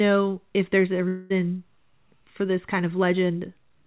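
Long network dropout, 1.08 to 1.32 s: about 0.22 s of audio likely never arrived, and the receiver bridged the gap with a fading buzz stretched from the last sound before speech resumes without it.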